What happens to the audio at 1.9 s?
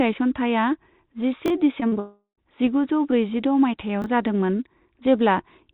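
Packets arriving too late for the decoder caused short concealed packet loss at 1.80–1.83 s, 1.87–1.94 s and 1.94–1.97 s. The receiver patched each 20 to 40 ms hole by extending the preceding sound, so the audio smears and wobbles briefly there.

Immediately afterwards, from 1.99 to 2.39 s, is a long network dropout, likely caused by a run of lost packets. The concealment stretches the last sound into a fading buzz or hiss, followed by about 110 ms of silence, and the audio resumes without the missing part.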